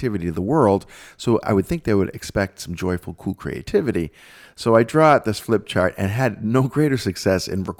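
No technical faults can be heard anywhere in the speech recording.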